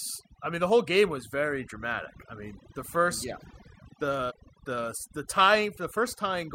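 Overdone noise removal runs through the whole recording: a noise reducer pushed too hard shuts off individual frequency bands whenever they sit close to its noise estimate. The background drops and breaks up into twinkling specks, and quieter parts of the speech vanish too.

Compressed frames skipped, from 4.30 to 4.32 s: complete blocks of the encoded stream never reach playback, so the audio leaps forward by something around 70 ms.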